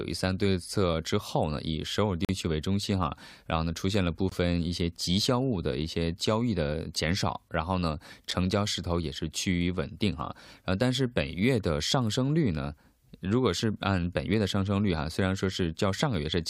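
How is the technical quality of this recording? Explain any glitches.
The recording has three brief dropouts. A gap between stream segments occurs at 2.25–2.29 s, 4.29–4.32 s and 8.31 s. Where 2 s segments meet, their timestamps leave a small hole that playback fills with silence, inserting hard-edged breaks of about 41 ms, 23 ms and under 10 ms.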